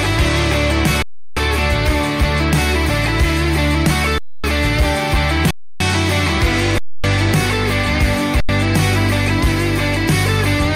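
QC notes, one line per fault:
throughout: hard clipping, peaks driven about 3 dB past the limit and cut flat on a small share of samples, giving brief crackle on loud moments rather than continuous fuzz.
1.02–1.37 s, 4.18–4.44 s, 5.51–5.80 s, 6.78–7.04 s, 8.40–8.49 s: underrun with held sample. The output freezes at a steady level for 85 to 341 ms, then resumes exactly where it stopped. Unlike a dropout to silence, it has little or no click and skips nothing.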